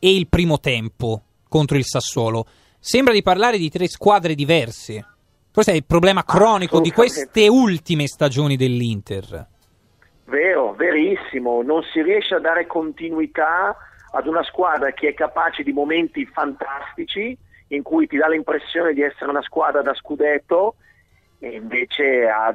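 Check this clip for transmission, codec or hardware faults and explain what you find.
No faults turn up in this clip. Nothing in the audio stands out as a problem that would need explaining.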